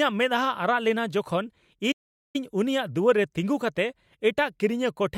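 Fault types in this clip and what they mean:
playback stall: The speech cuts off abruptly at 1.91 s, and the output stays silent for 425 ms until sound returns at 2.36 s. The break is a clean drop to silence rather than a fade, a click burst or a repeated fragment, and the audio carries on after it. The likely cause is the player running short of buffered data, or its output thread being held up, so nothing reached the output until it recovered.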